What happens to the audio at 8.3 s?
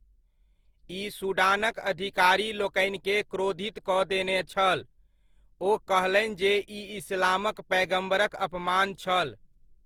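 At 8.3 s the speech carries generation loss, present throughout the clip rather than starting there. The sound points to repeated lossy coding, likely around four passes through Opus at a rate consistent with 48 kbit/s, each pass requantising on a shifted frame grid so noise stacks up. The result is a swirly, hollow, smeared quality with blurred consonant attacks, even though content still reaches about 20.2 kHz.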